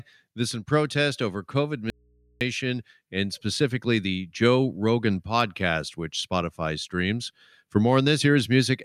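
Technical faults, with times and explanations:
1.90 to 2.41 s: audio dropout to a faint residue. The speech cuts off abruptly for about 0.51 s, leaving only mains hum roughly 35 dB below the signal. This is likely a momentary loss of the source while the downstream input stayed live, so the open path's hum is exposed.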